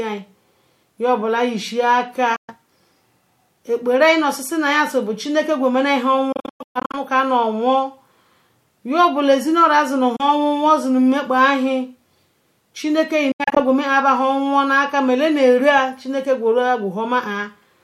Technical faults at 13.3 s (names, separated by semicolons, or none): Bluetooth dropout